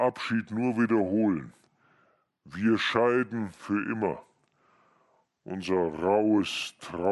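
Wrong sample rate runs throughout the speech, from start to end. The samples play slower than they were captured, with no conversion, so speed drops to 0.726 times and pitch falls about 5.5 semitones together. This fits 44.1 kHz audio played back at 32 kHz, making it sound low, dragged and heavy.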